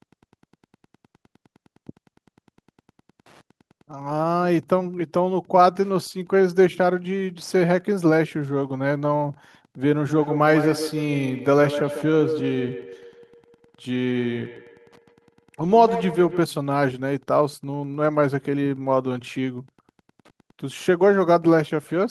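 Speech runs throughout the 22-second recording with a faint, regular ticking beneath it: Wi-Fi interference, where a nearby radio's beacon transmissions are rectified by the audio circuitry. The ticks repeat every 102.4 ms, just under ten a second, at roughly 40 dB below the speech. On a spectrogram they appear as evenly spaced thin vertical lines running through the silences. On a waveform they show as tiny regular spikes in the gaps. From 10.09 to 16.49 s there is a feedback echo between two devices. A second device in the same room is playing the call aloud, the first device's microphone picks the sound up again, and neither echo canceller removes the other device's playback. Each syllable returns about 150 ms later, peaking at about 8 dB below the direct speech. On a spectrogram each syllable's energy is followed by a displaced, fainter copy of itself. The waveform shows trailing duplicate bursts behind each syllable throughout that span.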